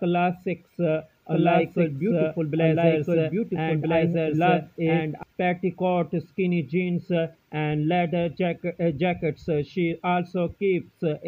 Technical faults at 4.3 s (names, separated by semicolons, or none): doubled audio track